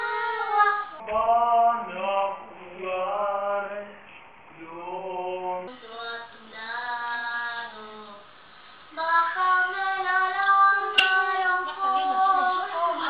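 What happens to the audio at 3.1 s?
At 3.1 s the audio sits inside a wrong sample rate fault from 1.0 to 5.67 s. The samples play back slower than they were captured, with no conversion, which fits 44.1 kHz material played at 32 kHz. Everything runs at about 0.73 times speed and drops about 5.5 semitones, sounding low and dragged.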